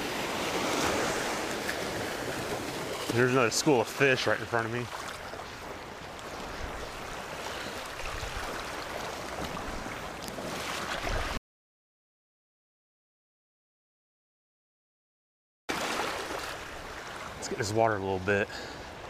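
Audio dropout to silence from 11.37 s to 15.69 s: the sound cuts off mid-flow and leaves about 4.3 s of silence with no room tone, then resumes abruptly. The input was likely lost, so the recorder kept writing silence and that material is gone.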